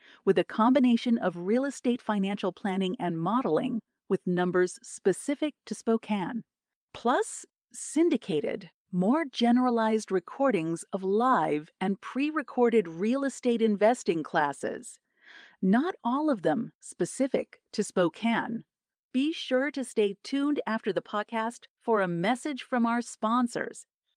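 No audible technical faults.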